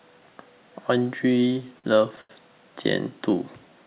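From 1.4 to 2.31 s the speech hits repeated stalls, a stutter where packets arrived late and the jitter buffer kept running dry. There are eight short hangs in that stretch, about 195 ms in total and roughly a fifth of the span, the longest 86 ms. Each time, the receiver stretched out the last bit of sound until it could carry on, so nothing drops out, but the phrase drags and judders. All of it sits on a narrowband G.711 call path, with nothing above 4 kHz.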